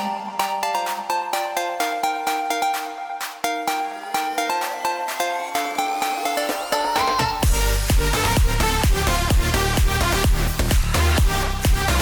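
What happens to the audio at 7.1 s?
Nothing goes wrong at 7.1 s; the audio plays through that moment intact, with no dropout, click, glitch or other fault to be heard.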